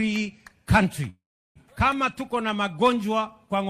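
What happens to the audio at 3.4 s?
Nothing goes wrong at 3.4 s; the audio plays through that moment intact, with no dropout, click or other fault.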